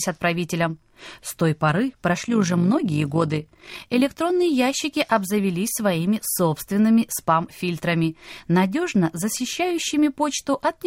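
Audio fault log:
2.22 to 4.02 s, overlap-add ripple: after "той поры", the frames overlap unevenly, so level pumps about 6 dB roughly fifty times a second, giving a robotic flutter until "ящики обзавелись своими собственными".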